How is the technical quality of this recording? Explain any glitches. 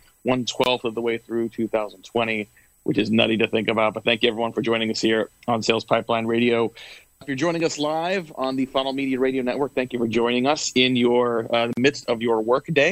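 The recording has two brief dropouts, each a gap at a join of encoded pieces: 23 ms from 0.64 to 0.66 s, and 43 ms from 11.73 to 11.77 s. Separately encoded segments were joined without trimming, so each encoder's start-up delay and padded final frame remain as silence. The sound cuts out and resumes where it stopped. On a waveform or spectrogram, each gap is a narrow blank column with smeared edges.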